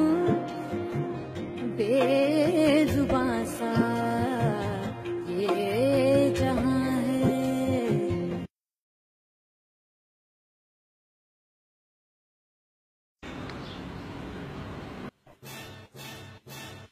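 From 15.09 s to the end of the clip at 16.91 s, the sound suddenly drops by about 30 dB. What remains is a faint trace with the solid centre gone. The likely cause is one channel inverted. With one stereo side flipped in polarity, everything the two channels share cancels when they are combined to mono, leaving only the small difference between them audible.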